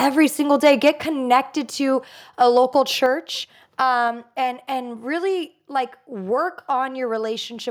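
Right at the start, from 0.65 to 0.89 s, the loudest syllables break up with a harsh, crackly edge. That's microphone overload. The input is likely running hot, about 3 dB past what the converter can take, so the tops of the peaks get flattened. Only a couple of percent of the samples are hit, but that's enough to hear. The same thing happens more gently from 2.41 to 2.58 s, only about 1 dB over, with a tiny fraction of samples clipped and a slighter rasp.

Shortly after each of those, the whole level sinks, voice and background together, by about 4 dB in a single jump, at 1.02 s and again at 3.06 s. That's the microphone volume stepped down. Most likely the call software noticed the clipping and pulled the device's input gain back in one move rather than easing it down.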